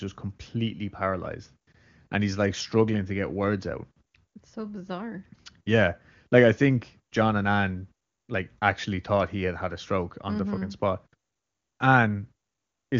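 Nothing here counts as a fault: the speech comes through with the clear, wide sound of AMR wideband (HD Voice) at one of its higher rates, and nothing along the way stands out.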